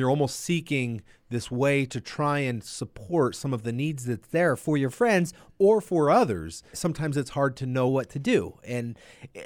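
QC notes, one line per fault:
4.35–5.49 s, drift correction step: the speech suddenly runs about 6.4% fast and rises 107 cents, roughly a semitone, then snaps back. Speed and pitch move together, likely because clock-matching software briefly changed the playback rate to rebalance its buffer.
7.88–9.46 s, drift correction step: the same jump recurs, 6.4% faster and 107 cents sharp, and lasts to the end of the clip. The linked speed and pitch shift points to a rate correction, likely applied to drain or refill a buffer between mismatched clocks.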